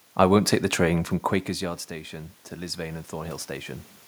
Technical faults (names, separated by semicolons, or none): automatic gain rising